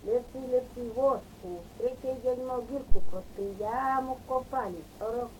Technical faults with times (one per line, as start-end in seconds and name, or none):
2.92-3.24 phantom power thump